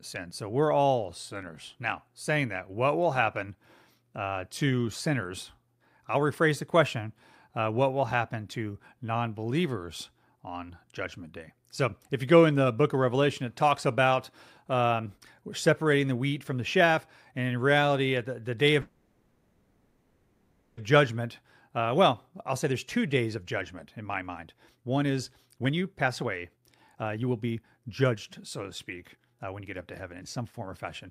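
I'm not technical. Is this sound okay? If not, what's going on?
No. Right after "at the the day", from 18.81 to 20.79 s, the speech stops and a fading buzz fills the gap before it carries on where it left off. This call audio freeze was likely caused by late-arriving network data. Then, from 21.21 to 28.63 s and again from 29.05 to 30.86 s, the talking sounds rushed but keeps its normal pitch, running at 116% and then 126% speed. This is jitter buffer speed-up: the receiver snips out tiny slices of speech, roughly a second in total and then about half a second, to catch up after the freeze.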